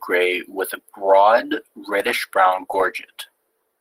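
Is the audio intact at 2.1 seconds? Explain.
No. At 2.1 s the clip is inside a call bitrate drop running from 2.00 to 3.37 s. The encoder's rate falls from 32 to 18 kbps and stays at its lowest for about 1.3 s. The coarser coding makes the speech sound rough and watery. On a spectrogram the fine harmonic detail would look smeared and blotchy over that span.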